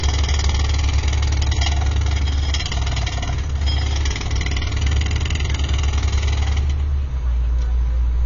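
AAC compression is audible throughout: nothing survives above 7.2 kHz, leaving the sound dull and smeared, with a warbling, fizzy texture. The likely cause is AAC-LC coding at a low bitrate, around 24 kbps, which discards the high bands and coarsely quantises the rest.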